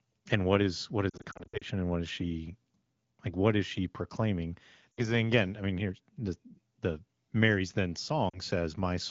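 From 1.10 to 1.64 s, between "what is what" and "and what is she", lost AMR speech frames scattered over about 0.5 s cause brief warbles and dips. The decoder repeats stale pitch and vocal tract settings at falling gain, shown as smeared, fading harmonics and notched waveform envelopes. Shorter dropouts follow at 4.92 to 5.13 s, after "is she proclaiming", and at 8.29 to 8.40 s. The surrounding wideband speech fits AMR-WB at about 12.65 kbit/s.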